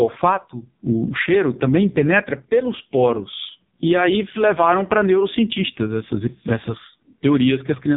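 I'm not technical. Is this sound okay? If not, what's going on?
No. The whole clip has heavy AMR narrowband mobile codec damage: everything above 3.8 kHz is gone, and the squeezed encoding makes the speech sound buzzy and synthetic.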